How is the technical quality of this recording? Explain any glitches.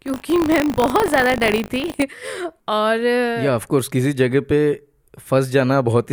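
The first two seconds have a real problem; after that the speech comes through without that glitch. From the start to about 2.03 s there's buffer tearing. The writer and the playback hardware have drifted out of step on the ring buffer, so every period a small slice, a few percent, is audio from roughly 40 ms earlier, with a hard splice on each side. Repeating 50 times a second, that gives a steady robotic 50 Hz buzz riding on the speech, which fits a 20 ms buffer period.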